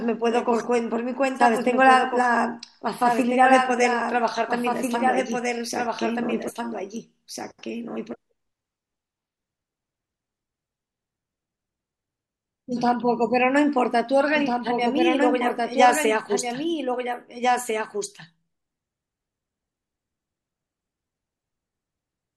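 From the start to the end of the speech, a doubled audio track runs under the main one. A second full-band copy trails by about a second and a half. It sits roughly 5 dB below the original. It has no reverb tail and no room colour, so it sounds like a clean echo of the same sentences arriving late. The likely cause is the same signal being captured twice, once through a slower path.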